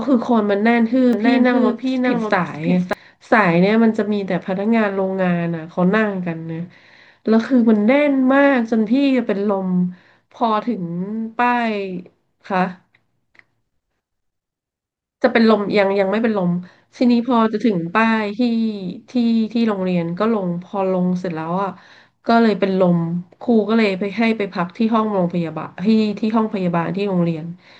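Speech, with a doubled audio track from 1.13 to 2.93 s: a second full-band copy trails about half a second behind, roughly 5 dB quieter, with no room tail, and it cuts in and out abruptly. It's likely a slower capture path or misaligned edit.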